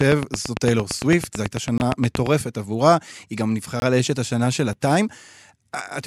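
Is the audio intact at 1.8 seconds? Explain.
No. From 0.01 to 2.28 s a train of clicks runs at a regular rate of about 9 per second, some twenty sharp ticks well above the level of the sound. The cause is likely interference or a faulty connection injecting repeated pulses.

There is also a gap between chunks from 1.78 to 1.80 s, a hard-edged hole of about 21 ms. It comes from the stream being split into 2-second chunks with silence inserted at the join, so the sound briefly drops out.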